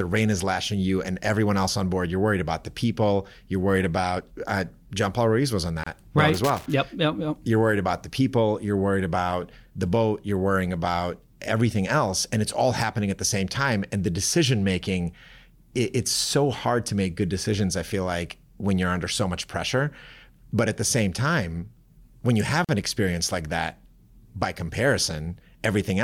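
At 5.84 s, just after "was on", the speech drops into a silence of about 30 ms before resuming exactly where it left off. This is a gap at a join of encoded pieces: separately encoded segments were spliced without trimming each run's start-up delay and padded final frame.

From 6.34 to 6.66 s an irregular burst of scratchy crackle cuts through the speech, the sound of a loose connector whose contact rapidly makes and breaks, chopping the signal.

At 22.65 s the same join gap returns, a 43 ms hole between "time when you have" and "an experience like that".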